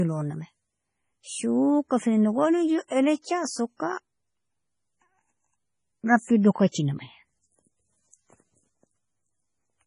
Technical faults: MP3 compression; pre-echo

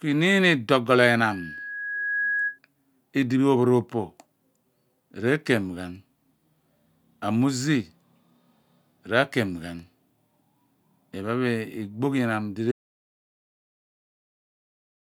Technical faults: loudspeaker feedback squeal; audio dropout to silence

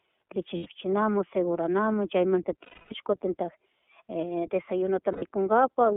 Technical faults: iLBC codec; lost iLBC frames

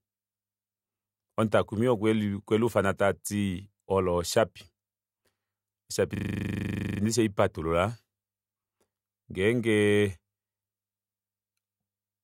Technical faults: system hang loop

